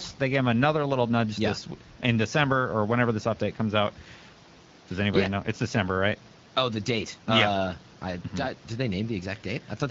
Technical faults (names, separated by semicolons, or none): none